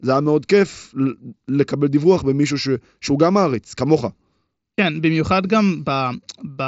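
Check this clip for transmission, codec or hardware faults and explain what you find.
No transmission, codec or hardware faults turn up in this speech; the signal has the band-limited character of a wideband Bluetooth headset link using the mSBC codec, reaching up to about 8 kHz, with only the light graininess that codec leaves on louder passages.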